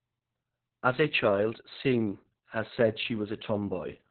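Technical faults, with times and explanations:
Throughout, Opus voice compression: muffled, hoarse, robotic speech with nothing above 4.2 kHz, from narrowband SILK coding at a bitrate that sounds near 6 kbps.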